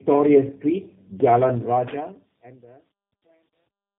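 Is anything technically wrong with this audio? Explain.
Yes. Two faults are audible.

Throughout, the speech has tandem speech coding: two low-rate speech codecs in sequence, consistent with AMR-NB feeding G.729A across a G.711 link. Each coder re-quantises the previous one's errors, so the speech sounds rough, muffled and warbly, with nothing above about 3.7 kHz.

From 1.6 s to the end, the fade-out shows truncation distortion. The gain stage keeps too few bits without dither, which fits about 11 bits, so the waveform collapses into coarse steps. The tail turns gritty, and from 2.52 s it is at its worst.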